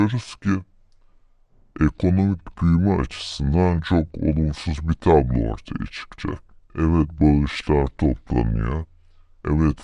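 From start to end, the speech plays at two-thirds speed and about 7 semitones low. This wrong sample rate fits 48 kHz audio played back at 32 kHz.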